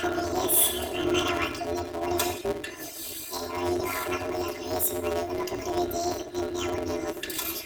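Planar audio read as interleaved runs throughout the speech, from start to end. Each block stores all its left samples before its right samples, but playback reads them as alternating pairs. That replays every 5.8 ms block twice at double speed, once per channel. The short blocks, which fit a 256-sample layout, give a robotic buzz at about 172 Hz rather than a clear octave jump.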